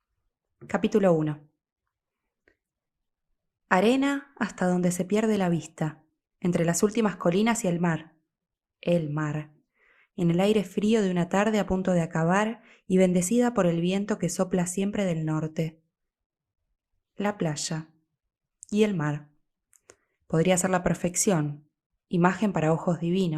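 Speech, with no technical faults to point to. Nothing in it calls for a time or a cause.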